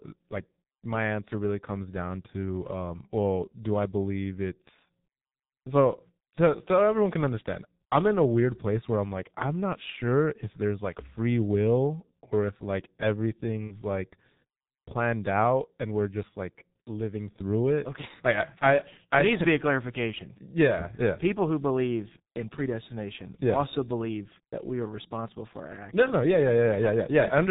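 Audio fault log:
throughout: G.723.1 codec. The audio carries the muffled, hoarse character of this low-rate internet-telephony codec, and the heavy coarseness fits its 6.3 kbit/s mode. Because it works in 30 ms frames and updates its vocal model slowly, consonants smear into their neighbours. On a spectrogram, energy stops sharply at 4 kHz with an empty band above, and formant tracks look blocky and step in 30 ms chunks instead of gliding.
13.67–13.75 s: VoIP packet loss concealed by the speech codec. About 30 ms of audio went missing, which points to one lost 30 ms frame. The decoder filled the gap by repeating its last pitch and filter at falling gain, so the sound briefly turns into a buzzy tone or coloured noise that fades. The effect outlasts the gap because each frame builds on the last. On a waveform this appears as a stretch shrinking in amplitude. On a spectrogram, the fill dims over its length.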